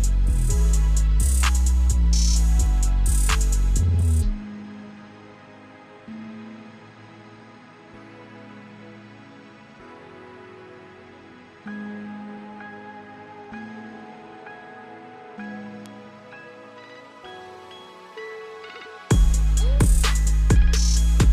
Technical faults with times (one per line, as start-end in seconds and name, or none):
2.66 bit error spike
15.86 bit error spike